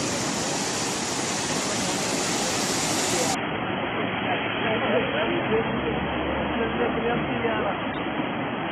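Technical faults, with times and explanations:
3.35 to 8.7 s, adaptive stream at a lower bitrate: The quality drops suddenly at 3.35 s and stays down to the end, with no gap at the switch. Everything above about 3.4 kHz is gone, so the sound turns dull and boxy. Codec artefacts grow, giving a smeared, watery texture. This points to the stream stepping down from about 96 kbit/s AAC to a 16 kbit/s version as the connection slowed. The encoder then drops the treble to save bits.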